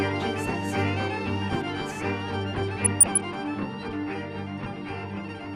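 From 2.79 to 3.21 s the sound burbles, with short blips of noise over the programme. This is DAB burbling: weak reception let a fraction of a percent of bits slip past error correction, corrupting MP2 samples so individual sub-bands get short blips of noise.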